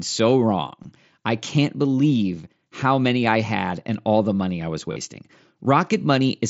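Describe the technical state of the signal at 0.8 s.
At 0.83 s there is a brief concealed Bluetooth headset packet loss, about 15 ms of missing audio, which fits a couple of lost headset packets. The receiver bridged the gap by repeating the best-matching stretch of the preceding waveform, so instead of a silent dropout or a click there is a short buzzy tone held at full level, with a small warble where the real mSBC-coded speech returns.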